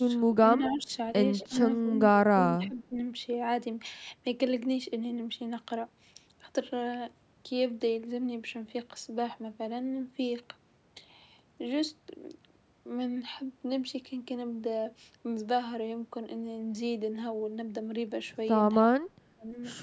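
From 0.0 to 0.92 s the speech dips by up to about 20 dB in pieces. This is speech suppressed in double talk. The echo canceller likely could not tell this talker from loudspeaker echo while both sides spoke, so it turned everything down. Inside that stretch, from 0.64 to 0.83 s, a faint copy of the voice trails about 250 ms behind, roughly 15 dB below the speech. This is echo leak. A speakerphone's canceller likely let part of its microphone pickup return. Short echo scraps recur at 1.39 to 1.48 s, about 25 dB down, and at 1.89 to 1.94 s, about 15 dB down. Each one again likely comes from the same leak, with the same 250 ms delay. The speech dips again from 1.49 to 1.91 s, by up to about 15 dB, and from 2.3 to 2.95 s, by up to about 20 dB. Both are likely double-talk suppression. Another faint echo scrap falls at 2.62 to 2.66 s, about 25 dB down. This is likely further echo leak. Near the end, from 19.14 to 19.47 s, the speech drops out hard, by up to about 35 dB. 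This is likely double-talk suppression once more. The sound stops at 8 kHz, and the lowest bass is trimmed by the call's microphone processing.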